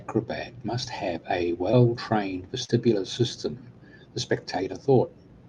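Short concealed packet loss at 1.71 to 1.75 s and 2.65 to 2.71 s: audio arrived too late, so the receiver extended the preceding sound, leaving brief smears.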